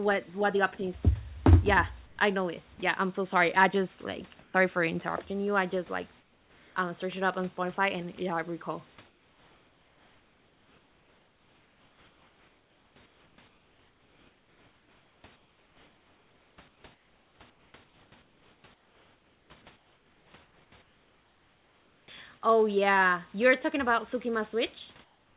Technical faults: comfort noise in place of the background; sound dropped by the voice detector; onset clipped by the voice detector

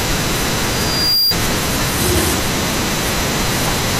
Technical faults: loudspeaker feedback squeal

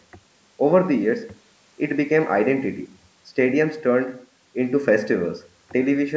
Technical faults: none

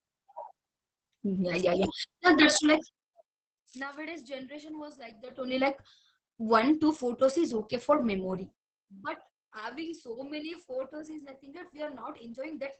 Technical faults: Opus voice compression

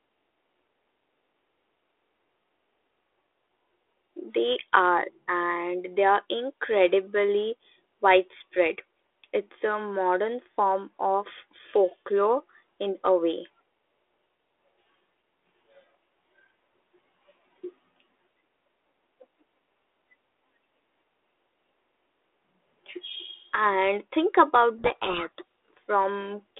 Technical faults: codec payload misread

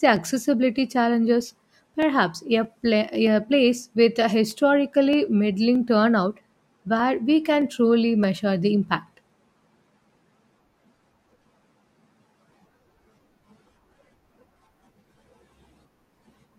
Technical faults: clock drift buffer slips

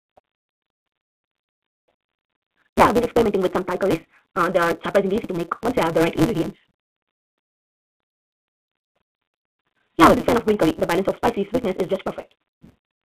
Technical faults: block size mismatch (truncated); packet loss with pitch repetition

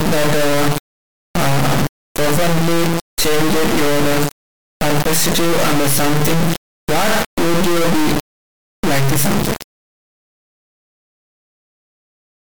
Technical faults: integer read as float

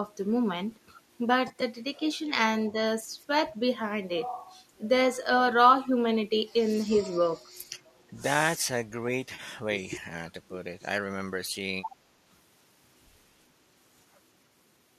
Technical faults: AAC frame loss with concealment; speech suppressed in double talk

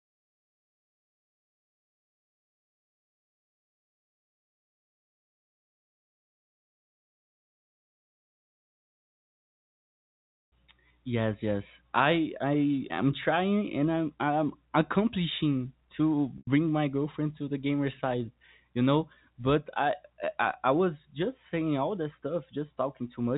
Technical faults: packet loss with pitch repetition

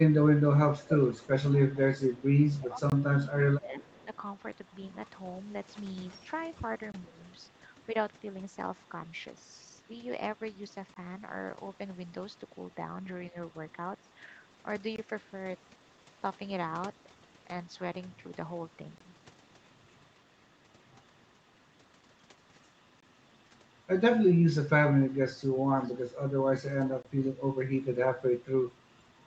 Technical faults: speech suppressed in double talk; echo leak; gap between chunks

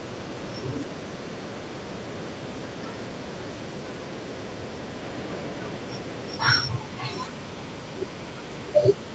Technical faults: echo leak

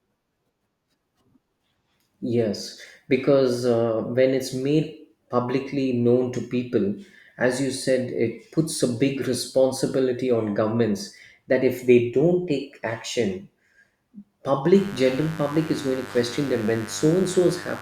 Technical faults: mains buzz

